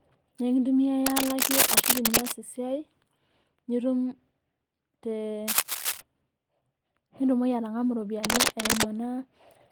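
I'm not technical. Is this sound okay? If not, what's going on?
No. What you're hearing is cable scratch noise, most likely from a worn cable or loose plug being moved so its electrical contact keeps breaking and reconnecting. Each time, a rough scratching, rustling burst lands on top of the speech: from 1.06 to 2.32 seconds, ending just before "e siai", then 5.48 to 6.00 seconds, and 8.24 to 8.83 seconds. The first and last bursts are louder than the speech; the middle one is about as loud.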